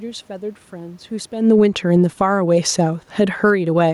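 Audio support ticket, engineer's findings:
Automatic gain falling, 1.34–2.37 s and 3.13–3.61 s: speech and room noise sink together, about 8 dB then about 6 dB. Input AGC judged level too hot and pulled gain down gradually. Background moving with speech marks it as gain, not acoustics.

Automatic gain rising, 1.65–2.9 s, overlapping first drop: level swells back about 4 dB over a bit more than a second, room noise rising with it. Same AGC stage raising gain, read as input too quiet. Talker movement around 1.5 s is separate, acoustic only.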